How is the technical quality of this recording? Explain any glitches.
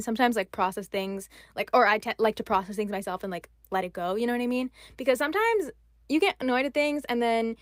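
Nothing here needs explaining: the speech comes across without any glitches, dropouts or other technical faults to point to.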